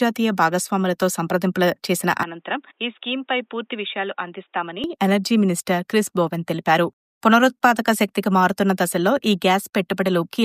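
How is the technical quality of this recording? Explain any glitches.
The recording has one clear fault. From 2.23 to 4.84 s the sound turns dull and roughly 10 dB quieter, with nothing above 3.8 kHz, likely an input switched to a poorer device. On a spectrogram the upper band goes empty, and the waveform shrinks with no gap at either switch.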